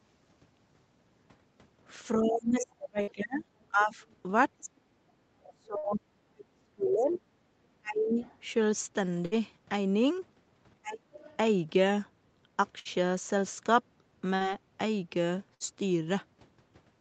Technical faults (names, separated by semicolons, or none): speech suppressed in double talk; other side's voice leaking through; burst of packet loss